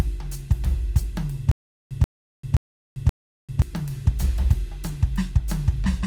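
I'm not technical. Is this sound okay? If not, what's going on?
No. Between 1.51 and 3.62 s the music falls into a stutter with silent gaps. A short scrap of about 133 ms plays, then there is dead silence for about 393 ms, and the pattern repeats every 0.53 s, four times in all. Unlike ordinary dropouts, where the music simply cuts out at random moments, here the same little piece keeps coming back at a steady beat. That points to a player that likely stalled and replayed its last fragment on each retry, so the music meant for that stretch is lost.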